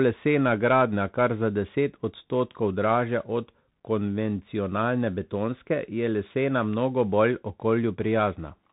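Throughout, the speech sounds narrow and muffled, cut off above 3.8 kHz, with scratchy s sounds over a granular hiss. That is the Bluetooth CVSD headset codec: one bit per sample steps up or down, which fits a 64 kbps link, and loud high sounds outrun the adaptive step.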